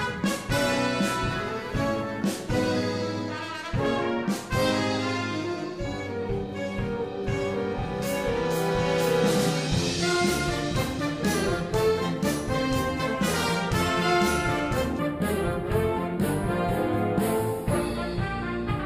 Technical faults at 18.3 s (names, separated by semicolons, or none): channel delay (comb filtering)